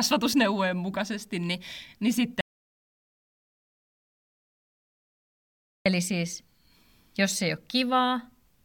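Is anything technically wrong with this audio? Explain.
Yes. An audio dropout to silence runs from 2.41 to 5.86 s, just after "mukaisesti niin niin": the speech cuts off mid-flow into total silence, with no room tone, for about 3.45 s. The likely cause is a lost input while the recorder kept writing silence.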